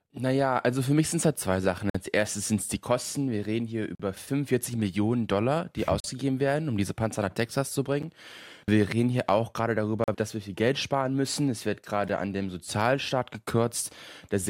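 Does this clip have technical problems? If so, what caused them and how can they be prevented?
Yes. Gaps between stream segments insert hard-edged silences every 2 s: 1.90–1.95, 3.95–4.00, 6.00–6.04, 8.03, 10.04–10.08 and 12.09 s. Segment time stamps leave holes, which the player fills with silence. Align the time stamps so each segment starts exactly where the previous one ends.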